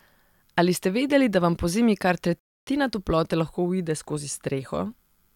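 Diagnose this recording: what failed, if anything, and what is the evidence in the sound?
A playback stall hits the speech at 2.39 s, right after "da vam pozimi kar", going silent for about 0.28 s before resuming at "toplote lahko uide skozi". The likely cause is the player starving for data or blocking its output thread. A waveform shows a flat silent gap, and a spectrogram shows a clean vertical blank band.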